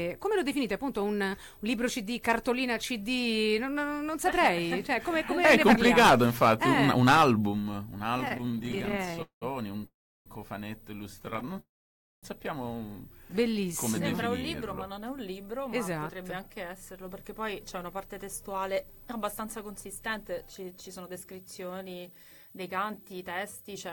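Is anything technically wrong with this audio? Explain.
Yes. From 8.17 to 9.44 s and again from 11.20 to 11.60 s the sound drags and stutters in repeated stalls, with dozens of tiny held gaps, the longest 192 ms. Packets arriving late kept draining the jitter buffer, and each gap was bridged by extending the last sound.

At 9.86–10.28 s and 11.60–12.25 s the sound hangs as a fading buzz and then drops to near silence for about 0.3 and 0.55 s. These call audio freezes were likely caused by packets held up in transit emptying the buffer, after which playback resumed where it stopped.

From 16.53 s to the end the audio runs about 7% fast at unchanged pitch and sounds hurried. This is jitter buffer speed-up: the receiver trimmed roughly half a second of short pitch-period slices to shed its excess delay.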